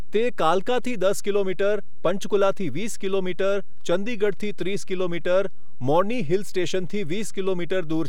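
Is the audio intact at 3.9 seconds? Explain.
No. At 3.9 seconds, as across the whole clip, the speech carries a DC offset of about -22 dBFS: a constant value added to every sample, so the waveform rides on a fixed level instead of centring on zero. The offset itself is inaudible, but it eats into headroom, so peaks reach clipping sooner on one side. On a waveform display the trace sits visibly off the centre line, and a spectrogram shows a steady band of energy at the very bottom.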